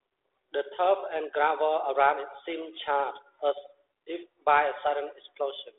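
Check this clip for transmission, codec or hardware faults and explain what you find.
I find no transmission, codec or hardware faults: the speech sits in a normal telephone band of about 150 Hz to 3.6 kHz, with nothing above 3.8 kHz, as this line should deliver.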